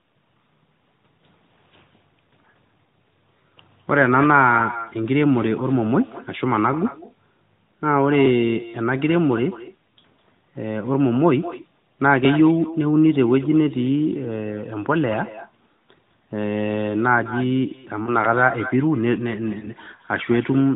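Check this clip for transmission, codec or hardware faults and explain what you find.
Two faults turn up: echo running under the whole recording, and two brief dropouts near the end.

Echo with no canceller: the far end's loudspeaker feeds back into its microphone and nothing removes it. Every phrase is shadowed about a fifth of a second later by a thinner copy, about 15 dB down.

Lost AMR speech frames at 18.04 to 18.10 s and 19.60 to 19.68 s: radio errors corrupted a frame, which fits a single 20 ms loss each time. The decoder reused its previous settings at lower gain, leaving a short dip or warble before the sound recovers, rough for a moment. The AMR-NB codec itself keeps everything below 4 kHz, with the light coding texture expected of its 12.2 kbps mode.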